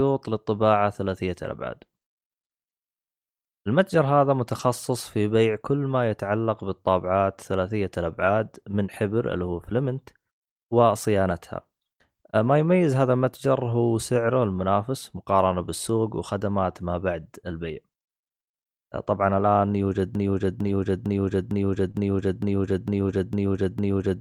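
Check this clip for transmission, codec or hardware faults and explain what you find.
The clip has three kinds of transmission fault: repeated packet losses repaired by error correction, one short loss covered by concealment, and a stalled stream that loops through the final seconds.

Lost packet rebuilt from error correction occurs five times: at 4.59 s, from 8.23 to 8.29 s, from 20.63 to 20.69 s, at 21.94 s and at 23.08 s. Each rebuilt stretch is 20 or 40 ms long, which fits one or two lost packets. The following packet carried a low-bitrate copy of the missing audio, so the decoder played that copy instead of leaving a gap. These moments sound rougher and noisier, without any dropout.

A broken-record loop starts at 20.15 s and runs to the end of the clip. A fragment of about 0.45 s repeats exactly, back to back, for roughly four seconds. The likely cause is a stalled player, encoder or stream that kept resending the last piece it held. 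Whatever audio should have followed 20.15 s is missing, replaced by the same short cycle over and over.

Short concealed packet loss spans 21.91 to 21.96 s. About 20 ms of audio arrived too late for the decoder, and the receiver filled roughly 25 ms by extending the preceding sound, using its pitch where it was voiced and shaped noise where it was not, before blending back. The error-correction copy at 21.94 s covers the tail of this hole. The result is a brief smear or wobble, and a short consonant there could disappear.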